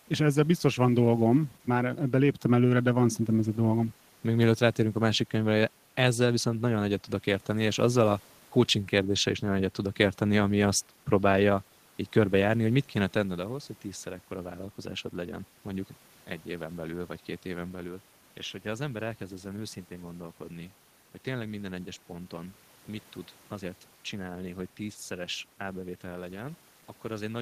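Nothing is technically wrong with this speech recording.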